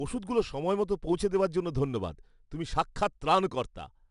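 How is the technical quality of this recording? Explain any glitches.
The speech is clearly degraded by 4-bit ADPCM compression across the whole clip, and the damage is plainly audible. Each sample is coded as a coarse 4-bit step from a predicted value, with a step size that adapts as it goes. The resulting error is a gritty hiss that rises and falls with the speech level, and sharp onsets distort when the step cannot grow fast enough. Nothing is present above about 10.6 kHz, and the rate fits roughly 89 kbps at a sample rate near 22 kHz. Unlike MP3-style artefacts, the noise does not swirl or warble; it is a steady grain locked to loudness.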